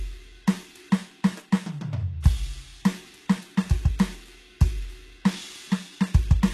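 A music clip with plainly audible HE-AAC compression damage throughout: treble is present but sounds synthetic and gritty, as copied lower bands stand in for real harmonics, and nothing remains above 12.3 kHz. Unlike a plain low-pass, the top stays bright; likely a very low bitrate near 16 kbps.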